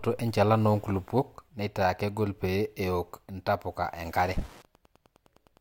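Wi-Fi interference enters at 4.18 s and runs to the end of the speech at 5.60 s. A Wi-Fi radio sitting close to the audio circuitry is transmitting its beacon every 102.4 ms, and the circuit rectifies those bursts of radio energy into the audio band. The result is a steady, mechanical ticking at roughly ten clicks per second, sitting low under the speech at about 30 dB below it.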